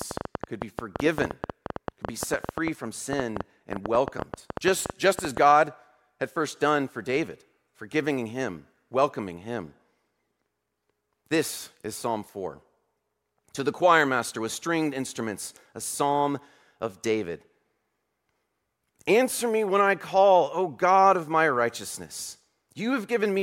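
From 0.02 s to 5.38 s a train of clicks runs at about 9 per second, irregularly spaced and well above the speech, likely from equipment interference.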